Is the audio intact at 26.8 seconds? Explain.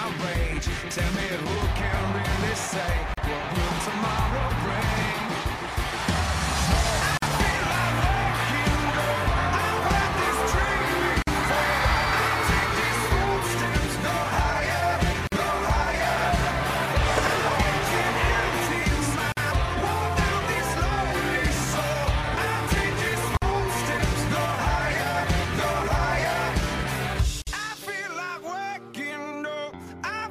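Yes, the audio at 26.8 seconds is intact, with no dropout, click, distortion or other fault to be heard there.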